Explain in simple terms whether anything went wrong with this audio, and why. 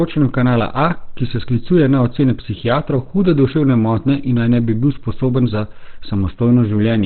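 Yes. From start to finish the speech sounds muffled and hoarse, like a phone call: nothing is heard above about 4.3 kHz, so the crisp, airy part of the sound is gone. The likely cause is Opus compression squeezed to a very low data rate. At that point the encoder switches to its speech mode and keeps only a narrow band of frequencies, trading clarity for size. The damage is heavy and runs through the whole clip.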